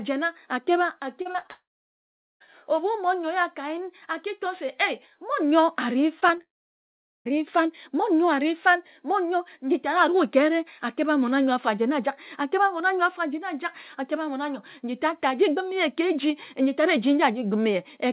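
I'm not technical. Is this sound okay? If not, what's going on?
No. The connection lost pieces of the audio several times, in three different ways.

Repeated packet loss (robotic sound): from 1.22 to 1.50 s, small chunks of audio were lost four times in quick succession. Each time, the receiving end covered the hole by stretching out the last bit of sound it had, so about half of that stretch is filler rather than real speech. You hear it as a choppy, robotic patch with pieces missing.

Long network dropout: right after, from 1.50 to 2.42 s, and again from 6.41 to 7.40 s, nothing came through for most of a second. The cause is likely the network connection dropping out briefly. The receiver carries the last sound on as a short fading buzz, then there is silence, about 0.8 s of it each time. When the audio returns, whatever was said during the gap is simply gone.

Short concealed packet loss: just before the second dropout, tiny slivers of about 20 ms went missing three times, within 6.20 to 6.32 s, 6.28 to 6.31 s and 6.38 to 6.41 s. 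The receiver patched each hole by continuing the last sound before it, then blended back in. These come across as brief smears or wobbles, and a short sound there can drop out.

The call line also carries nothing above 4 kHz, which gives the familiar narrow telephone sound.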